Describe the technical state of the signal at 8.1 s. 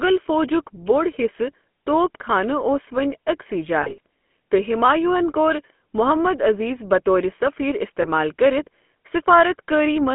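Lost GSM frames at 8.02 to 8.06 s, just after "محمد عزیز بطورِ سفیر": the decoder fills the gap by repeating the last good frame's settings. This gives a brief, rough metallic ring lasting about one 20 ms frame before normal decoding resumes.

GSM full-rate codec throughout, including 8.1 s: the voice is rebuilt from a vocal-tract model driven by sparse, regularly spaced pulses, which gives a plainly audible buzzy, gravelly roughness. The sound is confined to roughly 200 to 3.4 kHz, which fits 13 kbps full-rate coding.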